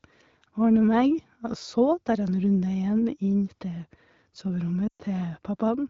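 Speech coded over an AMR wideband (HD Voice) link, its top end reaching to about 7 kHz with the clarity that fits 12.65 kbit/s, suffers lost AMR speech frames from 4.88 to 5.02 s. Across those 120 ms, which fits a run of six 20 ms frames, the decoder keeps replaying the last good pitch and vocal tract settings at falling gain, so the sound smears and fades out. A hard dropout would cut straight to silence instead. The speech then returns briefly weak.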